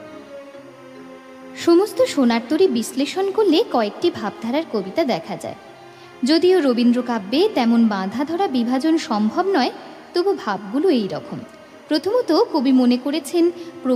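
A steady chirping warble sits behind the sound from start to finish, about 35 dB down, flipping between pitches around 1 kHz and 2 kHz. It is timecode bleed: 24-frame linear timecode leaking from a neighbouring track or cable into the audio.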